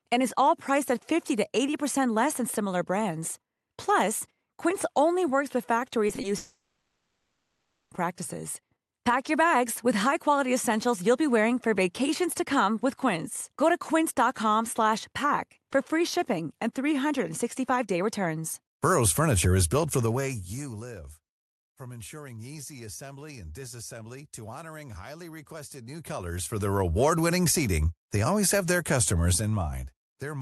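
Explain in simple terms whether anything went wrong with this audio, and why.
Around the six-second mark the speech briefly breaks up in three places: at 6.07, 6.15 and 6.21 seconds. Each is a short concealed packet loss. A few hundredths of a second of call audio arrived too late, so the receiving end patched the gap by stretching the sound just before it and then blended back in. You hear a tiny smear or flutter rather than a gap. That smear is what separates these from the longer break that follows.

Right after, from 6.37 to 7.93 seconds, comes a long network dropout, likely caused by a stall in the connection. For about a second and a half, nothing real gets through. The receiver keeps the last sound going as a fading buzz or hiss, and only a short moment of near-silence remains near the end. When speech resumes, the missing stretch is simply gone. It is not delayed, and it is not smeared the way the short patches are.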